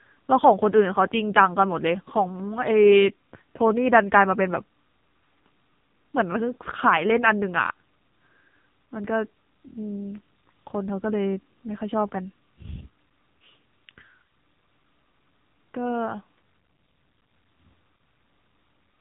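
Speech squeezed through the AMR narrowband mobile codec for the whole clip: nothing gets past about 3.8 kHz, and the heavy buzzy, synthetic colouring from the vocal-tract model fits a low mode around 6.7 kbps, so the voice sounds like an old phone call.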